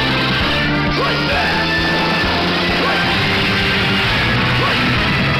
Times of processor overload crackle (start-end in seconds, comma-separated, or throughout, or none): none